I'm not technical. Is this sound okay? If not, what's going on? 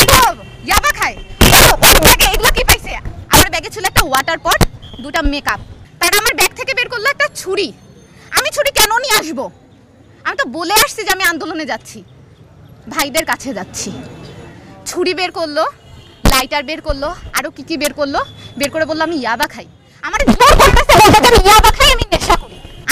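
No. Throughout the clip, the loudest moments break into sudden, harsh cracks instead of simply sounding loud. This is integer overflow: the level was pushed slightly past the largest value the digital format can hold, and rather than being capped, those peaks wrapped around to the opposite extreme. Only a small fraction of the sound goes that high, so the cracks are brief, but each one is a violent jump, much sharper than ordinary distortion.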